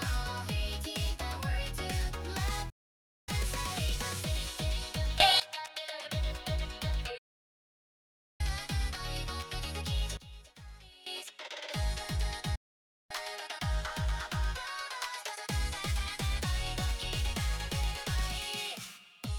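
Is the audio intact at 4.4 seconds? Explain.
Yes, at 4.4 seconds the audio is intact, with no dropout, click, distortion or other fault at that moment.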